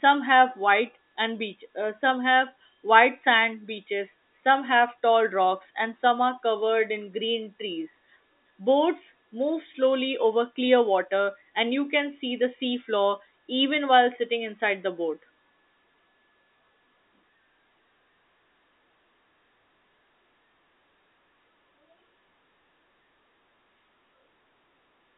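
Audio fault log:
No faults can be heard in this speech clip. The G.711 telephone coding path keeps the sound within a line band of 250 Hz to 3.7 kHz, with nothing passing above 3.8 kHz.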